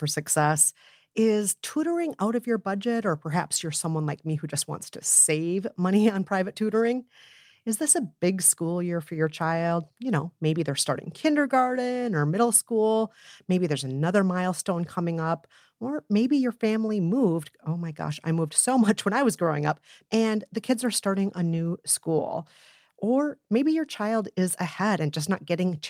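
Speech recording; no technical faults detected.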